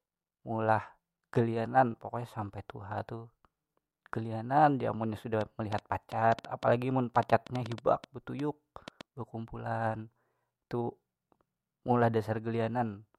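Something in the chain, likely electrical interference from nearby equipment or a faulty connection or power supply, begins injecting short pulses into the speech at 5.41 s and keeps it up until 9.02 s. The result is a train of clicks: around twenty near-identical pops, about 5.3 per second but unevenly spaced, landing over the speech and in its pauses alike. They stand roughly 10 dB above the speech, so the ticking sits clearly on top of it.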